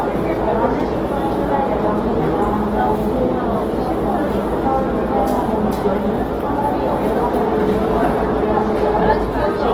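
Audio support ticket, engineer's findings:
Opus compression, full 0 to 9.7 s: likely Opus encode in music (CELT) mode, starved of bits; the texture fits a rate near 16 kbps. Band energies preserved, fine detail replaced by folded or noise-filled bands. Result: tonal parts grainy, rough, noisy; artefacts plainly audible throughout. Bandwidth still fullband, nothing above about 20.2 kHz, so no dulling or muffling and no switch to speech mode. Little swirling; damage heard as texture, not holes.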